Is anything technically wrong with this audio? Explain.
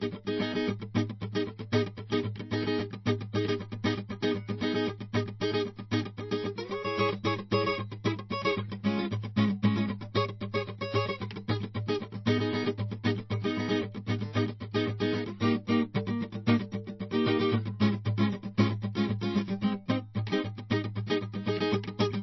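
Yes. Throughout the music, the top end stops dead at about 5.8 kHz, and the sound has the smeared, swirly texture of heavy MP3 compression. This is low-bitrate audio saved at a high bitrate. It was likely first encoded as MP3 at around 28 kbit/s, then re-encoded at 256 kbit/s. The second pass cannot bring back what the first threw away. So the highs and air are missing, and the file is large yet sounds dull and grainy.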